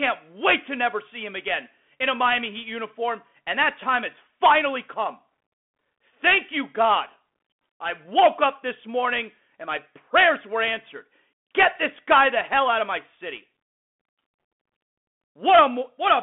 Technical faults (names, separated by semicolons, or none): Bluetooth CVSD headset codec